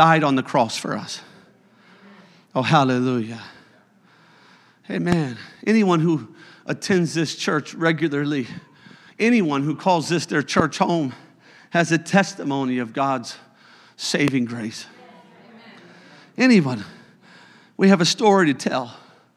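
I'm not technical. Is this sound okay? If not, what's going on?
No, three loud pops, at 5.12, 10.60 and 14.28 seconds, the middle one strongest, each a single sharp thump over continuing speech, likely from a plug, switch or static.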